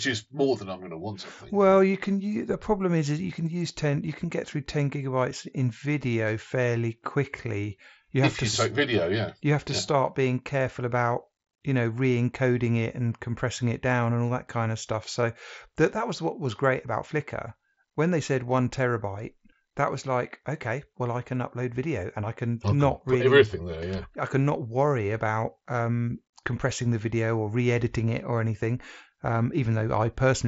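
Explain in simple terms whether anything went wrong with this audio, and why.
Nothing went wrong here.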